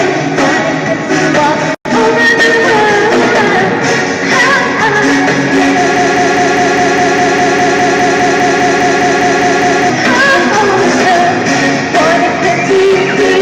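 At 5.96 s the audio snags into a broken-record loop: the same 0.2 s fragment repeats back to back, 19 times, until 9.90 s. Most likely the player, encoder or stream stalled and kept resending its last chunk, so whatever should have played there is gone.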